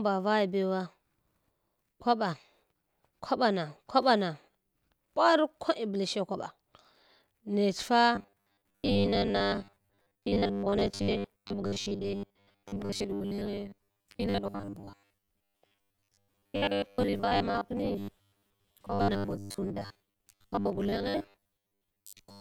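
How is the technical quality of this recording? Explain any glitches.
The recording has one fault: robotic sound from repeated short buffers. It starts at 8.15 s and lasts until 22.40 s, the end of the clip. Here the speech becomes a rigid, metallic buzz pitched at 100 Hz. The words are still roughly traceable. The likely cause is audio arriving too slowly. The playback fills each gap by looping the latest 10 ms chunk. Around 70% of the sound is repeated material, and the real audio in those gaps is lost.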